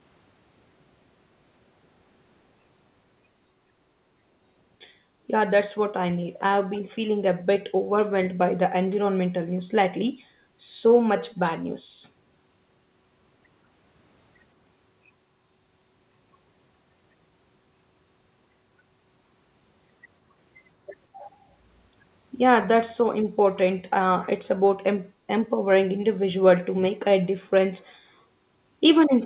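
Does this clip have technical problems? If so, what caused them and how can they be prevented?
Yes. An echo leak appears from 11.29 to 11.39 s: a faint copy of the speech trailing 172 ms behind, likely a far-end echo canceller passing its loudspeaker's sound back. Prevent it with headphones or a better-tuned echo canceller on the far side.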